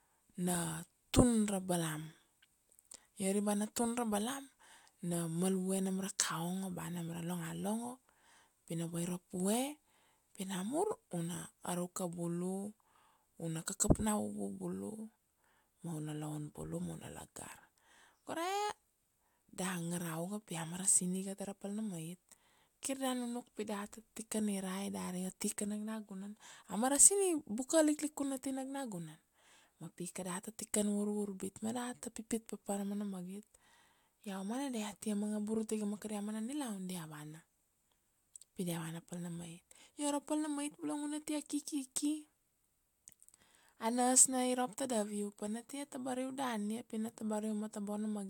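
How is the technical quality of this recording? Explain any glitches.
The technical quality of the recording is sound, with no glitches to explain.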